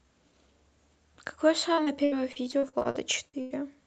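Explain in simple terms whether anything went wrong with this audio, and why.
Repeated packet loss (robotic sound) runs from about 1.73 to 3.53 s. During this stretch, pieces of the speech kept arriving late or not at all, with the longest gap lasting 94 ms. The call software covered each gap by stretching out the last bit of sound it had, and about a quarter of that stretch is this filler. That is why the speech turns choppy and robotic there, and the dull top end from the call codec stays the same throughout.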